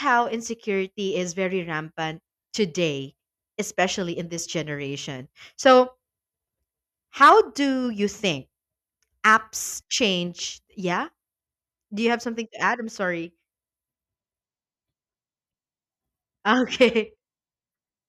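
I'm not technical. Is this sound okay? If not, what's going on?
Yes, nothing in this speech recording stood out as a problem when I listened to it.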